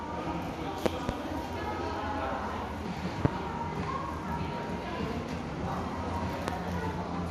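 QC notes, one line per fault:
Throughout, MP2 compression: likely a low-rate MPEG Layer II encode, sounding near 80 kbps, starved upper sub-bands, nothing above 14.4 kHz, dull, gurgling, granular texture.
0.86–1.12 s, 3.25–3.28 s and 6.48–6.51 s, loud pop: likely voltage steps entering the chain, a double pop then two single pops, roughly 25 dB above the sound, which continues underneath.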